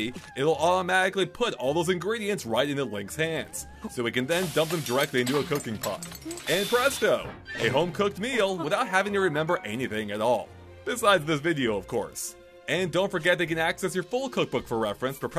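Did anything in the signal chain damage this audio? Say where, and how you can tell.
No, nothing in the signal chain audibly damaged this audio.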